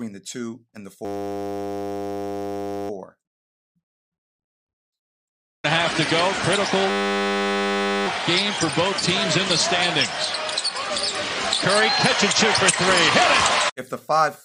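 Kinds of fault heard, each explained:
System hang loop: the system stalled while the audio hardware kept replaying one 10 ms slice of its ring buffer, giving a steady 100 Hz buzz from 1.05 to 2.9 s and 6.9 to 8.07 s. A waveform shows identical repeating cycles; a spectrogram shows flat harmonic stripes at 100 Hz multiples.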